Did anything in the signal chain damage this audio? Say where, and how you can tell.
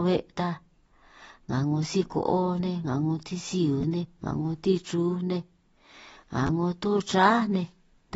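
Yes, at two stages. Throughout the speech there is a hard ceiling with nothing above 7.6 kHz, plus a dull, smeared quality and a fizzy, warbling texture on sibilants and held vowels. The likely cause is AAC compression, AAC-LC at a low bitrate consistent with about 24 kbps, quantising the spectrum too coarsely. A spectrogram would show a flat cut-off at 7.6 kHz, with patchy holes and noisy-looking fill in the upper bands.

The second problem is at the driver or buffer stage: two repeated buffers, at 3.81 to 3.83 s and at 6.47 to 6.49 s. Each sounds like a brief buzzy stutter. A short slice of about 11.6 ms, which fits a 512-sample buffer, plays three times in a row because fresh audio arrived late, and about 20 ms of real audio is lost. On the waveform you would see identical repeated blocks with abrupt discontinuities at each join.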